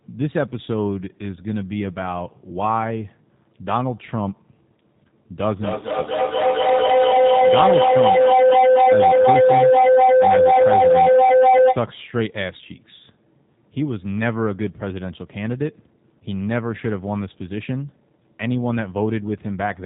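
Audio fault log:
throughout G.729 codec: nothing above 4 kHz and a plainly rough, synthetic edge, as you'd expect when an 8 kbit/s coder rebuilds speech from sparse pulses.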